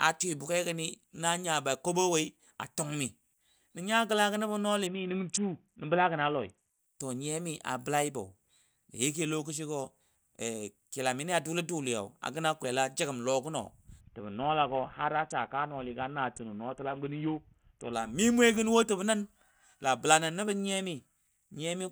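Speech, hit by two Bluetooth SBC bit pool drops at 4.87–6.79 s and 14.01–17.93 s. Treble dulls while gritty noise rises, unlike a clean low-pass, which fits a starved, likely congested link.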